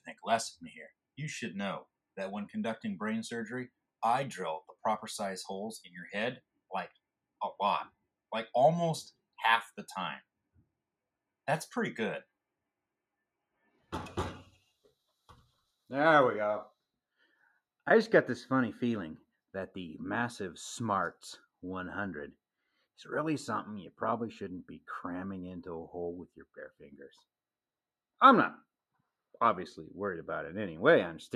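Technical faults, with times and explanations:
10.45–10.81 s, 13.54–13.92 s and 26.27–26.86 s: sound cut by the noise suppressor. In each span the level sinks, then recovers. The deepest drops are about 22 dB, about 19 dB and about 14 dB. The affected stretches last roughly a sixth to a third of a second. The suppressor judged this sound to be background noise. It pulled it down harder than everything around it, which leaves these brief dips in level.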